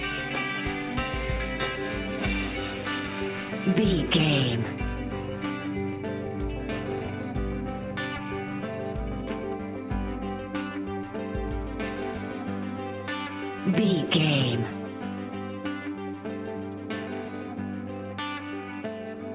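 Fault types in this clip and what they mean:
No faults found; the audio comes over a call path with nothing above 4 kHz, which fits G.711 mu-law at 64 kbps, and that band limit is normal for such a path.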